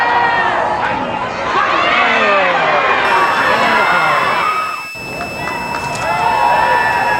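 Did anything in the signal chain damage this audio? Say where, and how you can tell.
Yes, in the analogue stage: a switching supply whistle from 3.05 s onward. A regulator cycling in audible burst mode or beating with another supply draws a thin spectrogram line wandering between 2.6 and 2.7 kHz, roughly 15 dB down.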